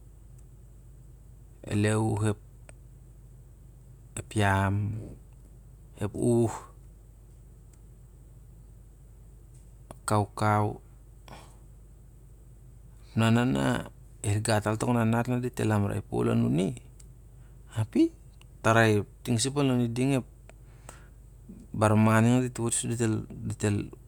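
No technical faults can be heard anywhere in the recording.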